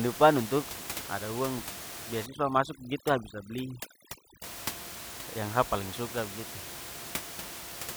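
From 2.26 to 4.44 s, noise removal is overdone: the suppressor pulls individual frequency bands down or out wherever they sit near its noise estimate, taking the softer parts of the speech with them. The room noise, about 11 dB below the speech, drops and breaks up into twinkling specks.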